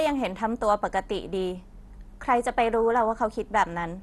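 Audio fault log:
throughout: MP2 compression. The speech sounds dull and gurgling, with a granular roughness and nothing above 12.1 kHz. This is likely MPEG Layer II coding short of bits, consistent with about 64 kbps, so upper sub-bands are dropped and the remaining bands coarsely quantised.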